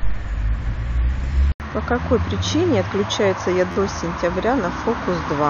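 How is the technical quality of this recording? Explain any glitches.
The recording has two technical faults: a change of input partway through, and a brief stutter later on.

From 1.52 s to the end, the input was likely switched to a poorer device. The replacement path passes nothing above 6.6 kHz, so the speech turns duller and more boxy. It arrives about 5 dB quieter and carries its own background noise, roughly 40 dB below the speech. An 80 ms gap of silence marks the moment of the switch.

Between 3.72 and 3.76 s, a repeated buffer occurs. Fresh audio failed to reach the output in time, so the device replayed its last block, an 11.61 ms piece, four extra times, which fits a 512-sample buffer. Each replay starts with a hard join, so the repeats run together into a short buzzing stutter. The speech that should have filled that span, roughly 50 ms, is lost.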